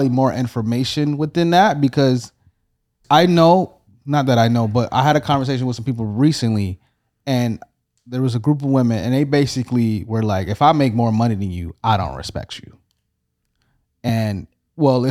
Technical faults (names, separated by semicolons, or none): compressed frames skipped